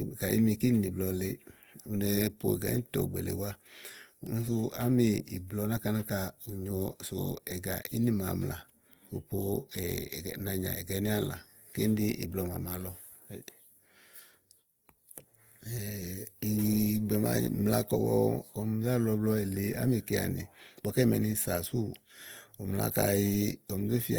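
Throughout the speech the sound is rough and grainy, with harmonics dissolving into hiss. This is likely Opus compression in its music mode, at a rate near 24 kbps. A spectrogram shows full bandwidth to 20.2 kHz, with bands filled by speckled noise instead of clean harmonic lines.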